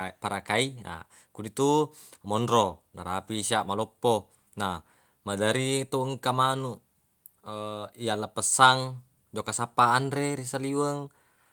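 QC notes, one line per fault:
No technical faults heard anywhere in this recording.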